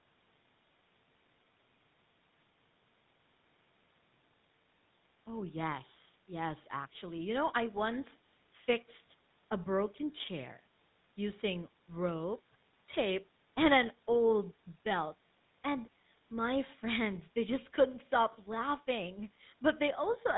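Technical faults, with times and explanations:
Throughout: GSM full-rate codec. The speech has a plainly audible buzzy, gravelly roughness. The coder models the vocal tract, then drives it with a coarse pulse train that keeps every third excitation sample, consistent with a 13 kbit/s coder. A spectrogram shows nothing above 4 kHz.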